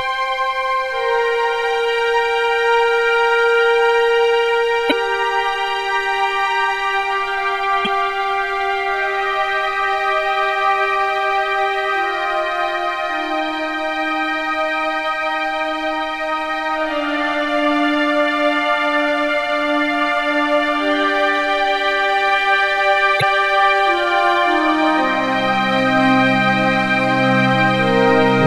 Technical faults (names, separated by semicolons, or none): damaged data in a compressed stream